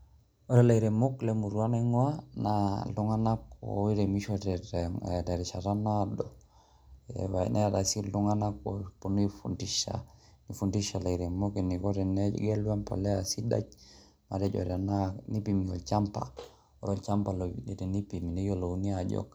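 Speech with no audible faults.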